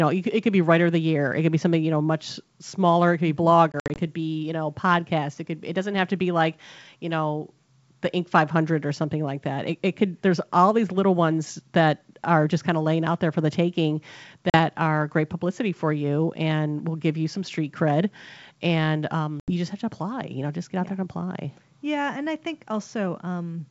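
Right after "smaller it could be", around 3.72 to 4.01 s, there's packet loss on the ADPCM call: about 120 ms of silent, hard-edged holes scattered over 240 ms, the longest 60 ms. Smaller gaps follow at 14.50 s (40 ms, after "there for the taking") and 19.40 to 19.51 s (80 ms, after "some street cred and"). Each time the decoder's predictor and step size lose track of the sender's, so the speech comes back slightly distorted before settling. The wideband G.722 coding underneath sounds clean, pointing to the full 64 kbit/s mode.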